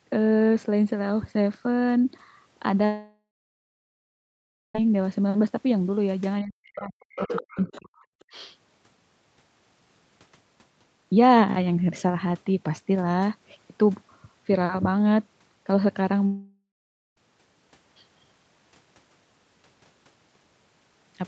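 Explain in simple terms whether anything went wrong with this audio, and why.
Two stretches of this speech go missing, which is a long network dropout. From 2.85 to 4.75 s, about 1.9 s of sound never arrives. The receiver stretches the last sound into a fading buzz. Then there is about 1.5 s of silence. The same thing happens from 16.26 to 17.17 s, with about 0.9 s lost and half a second of silence. In both cases the speech picks up later, and the missing part is gone. Packets were most likely lost on the network.

From 6.42 to 8.05 s, the talker's speech sinks very low and breaks up, for about a second in total. This is speech suppressed in double talk. It most likely happened because the person on the other end spoke at the same moment. The echo canceller couldn't tell the two voices apart, so it turned the whole signal down. That included the talker it should have kept.

The other side's voice leaking through also shows up. 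From 7.10 to 7.78 s, a second voice can be heard, though quieter than the talker. A much fainter scrap follows at 8.20 to 8.24 s. The likely cause is that the talker's loudspeaker played the other person's voice. The microphone picked it up, and the echo canceller didn't remove all of it.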